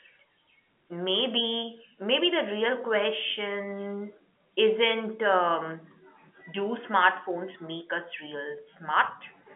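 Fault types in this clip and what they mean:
No faults can be heard anywhere in this speech clip. It carries the sound of G.711 telephone coding, with the line band running from about 250 Hz to 3.4 kHz and nothing heard above 3.6 kHz.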